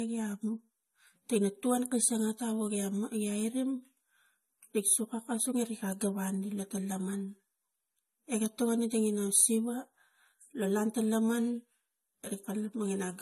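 Transcoding between lossy codecs runs throughout the speech, with nothing above 12.5 kHz. The layered smearing and swirly artefacts are likely from an MP3 encode re-encoded as AAC-LC, both pointing to about 48 kbit/s, each stage stacking its damage on the last.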